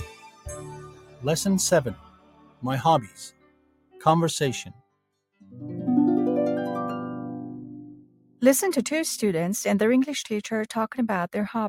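Right from the start you can hear a noise suppressor applied to music or sounds: a speech-tuned suppressor is running over material it wasn't built for, treating sustained, steady content as if it were background noise. Its gain keeps swinging by something like 15 dB, so the level breathes and pumps. Transients mostly punch through while anything held or decaying gets pulled down, which leaves the whole thing sounding thin and unsteady.

The worst of it shows up as sound cut by the noise suppressor in five stretches: 0.05 to 1.24 s, dipping by about 15 dB; then 1.94 to 2.64 s, 3.02 to 4.02 s, 4.71 to 5.03 s and 7.84 to 8.42 s, each sinking by about 18 dB at the deepest. In those spots the suppressor decided the sustained material was noise and clamped down hard. Tails get chopped short and levels slump audibly, then recover once something sharper arrives.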